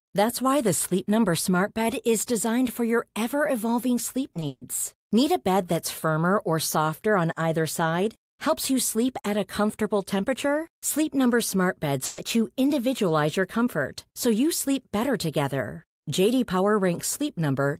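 Short concealed packet loss hits this speech recording at 4.33–4.37 s and again at 4.39–4.43 s, just after "your ever evolving sleep". In each, about 20 ms of audio arrived too late, and the decoder extended the preceding sound to cover the hole, leaving a brief smear. A burst of packet loss follows at 4.47–4.63 s, where roughly 140 ms was lost and patched by a continued, fading sound that drops into about 10 ms of silence before the real audio resumes further on. A second burst at 12.05–12.19 s, just before "you individualize your comfort", replaces about 120 ms with the same decaying continuation and no silent gap.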